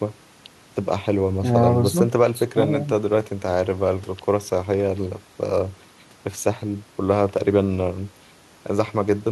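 Nothing goes wrong anywhere in this bit of speech, so there's no fault to point to at any moment.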